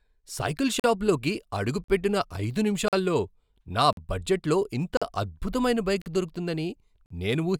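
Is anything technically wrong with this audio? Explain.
Yes. The speech has a gap between chunks, seven times, at 0.80, 1.84, 2.88, 3.93, 4.97, 6.02 and 7.06 s. Each is a 44 ms hole, once per second. Silence sits between 1 s chunks, as at "పెట్టిన ఐదు" and "బడ్జెట్లో ఇంత అద్భుతమైన".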